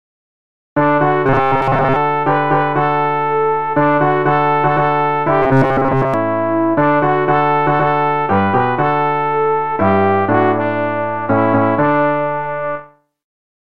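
From 1.26 to 1.96 s, and again from 5.43 to 6.14 s, the sound collapses into a rigid, metallic buzz pitched at 134 Hz: robotic sound from repeated short buffers. The likely cause is audio arriving too seldom, so playback loops the last fragment of roughly 7.5 ms and skips real material for most of each stretch. That fixed loop length imposes the steady 134 Hz tone while the underlying sound still moves roughly beneath it.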